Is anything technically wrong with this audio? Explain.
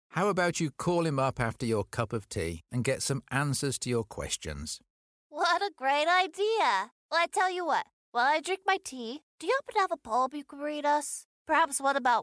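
No, nothing technically wrong can be heard here.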